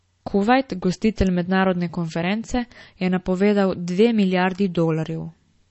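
MP3 compression damage runs through the whole of this speech clip: nothing is present above 8 kHz, and the remaining band has a watery, swirling quality with metallic chirps on s sounds and softened consonant attacks. The likely cause is a low-bitrate MP3 encode, consistent with something around 32 kbps, where the encoder, short of bits, cuts the treble at a fixed point and lets weak frequency lines drop in and out from frame to frame.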